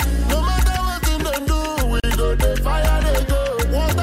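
At 2.0 s a gap at a join of encoded pieces opens a 36 ms gap in the continuous sound, with smeared edges. Unlike a dropout, nothing is lost: the sound resumes exactly where it stopped. A 4 s spacing fits separately encoded 4 s segments whose start delay and end padding were left in.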